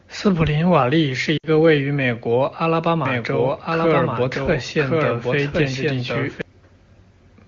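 A speech recording coded with AMR wideband (HD Voice), sounding clear, has two faults. From 1.37 to 1.48 s, lost AMR speech frames cause a brief smeared, fading gap. About 60 ms of speech is missing, which fits three consecutive 20 ms frames. The decoder patches the gap by repeating the last good frame's settings at falling gain, and the speech resumes weak or rough for a moment. From 3.06 to 6.42 s a doubled audio track is heard: a full-band copy of the speech, roughly as loud as the original, trails it by about one second with no reverberant decay. It starts and stops abruptly, likely from a second, slower capture path mixed into the output.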